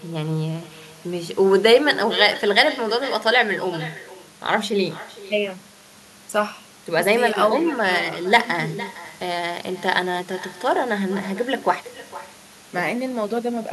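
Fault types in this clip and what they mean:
Echo with no canceller: every phrase is trailed, roughly half a second later, by a quieter, thinner copy about 16 dB down, running through the whole clip. The far end's loudspeaker feeds its microphone and nothing subtracts it, so the speech returns after the network round trip.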